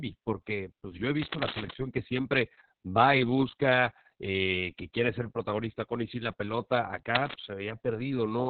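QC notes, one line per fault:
Throughout: Opus voice compression. Nothing is heard above 4.4 kHz, so the speech is narrowband and muffled. The coarse linear-prediction coding makes it hoarse and slightly robotic. The heavy damage fits the SILK mode at a very low bitrate, around 6 kbps.
1.21 to 1.78 s and 7.14 to 7.37 s: cable scratch noise. Dense, uneven bursts of scratching sit over the speech, nearly as loud as it. This is likely a worn cable or connector being moved, so its contact resistance flickers rapidly.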